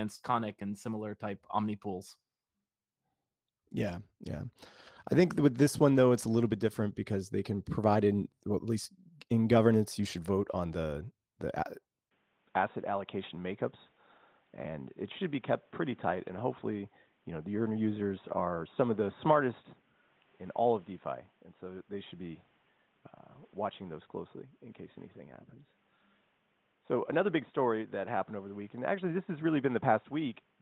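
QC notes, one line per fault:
12.09–30.61 s, input switched to a poorer device: after a 20 ms gap the speech turns boxy and dull, with nothing above 3.8 kHz, a new noise floor about 40 dB under the signal and a level roughly 5 dB lower, most likely a change to a narrower microphone or headset profile. Codec band-narrowing would step cleanly to 8 or 4 kHz with no gap or noise change, and the light fullband Opus coding before 12.09 s shows none of that.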